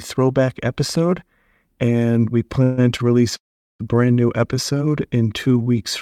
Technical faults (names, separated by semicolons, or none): call audio freeze; short stall from a late packet; jitter buffer slow-down